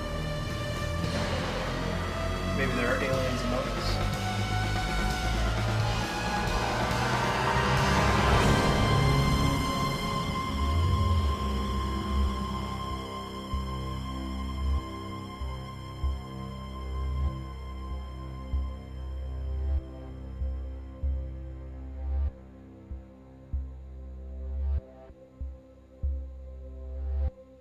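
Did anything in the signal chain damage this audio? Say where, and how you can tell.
No, nothing audible points to damage at any stage of the chain.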